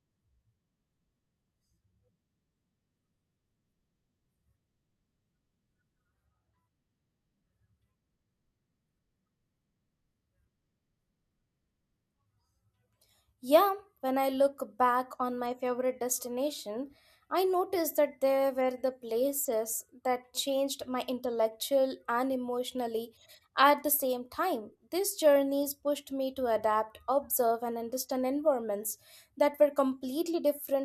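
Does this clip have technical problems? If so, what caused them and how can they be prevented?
No, nothing in this speech recording points to a technical fault, so there is no cause to trace and nothing to prevent.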